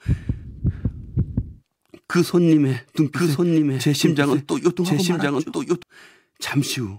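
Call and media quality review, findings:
Speech repeats itself about a second late, 2.99–5.83 s, dry and somewhat quieter, abrupt on and off. Doubled audio track: likely second capture via slower path.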